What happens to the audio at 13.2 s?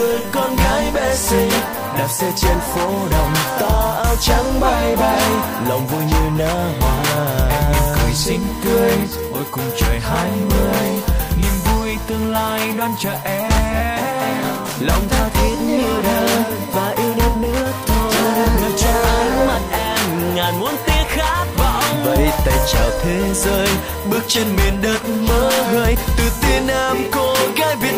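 USB whine sits under the audio at 13.2 s, as it does across the whole clip. The USB bus pulls current in regular 1 ms frames, and those pulses leak into the audio path through shared power or ground. The result is a steady, fixed-pitch whine at 1 kHz, strongest right at that frequency, riding roughly 20 dB below the wanted sound.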